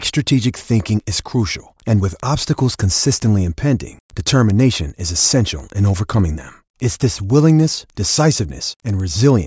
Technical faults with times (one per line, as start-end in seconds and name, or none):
0.00-9.46 resampler restarted on every block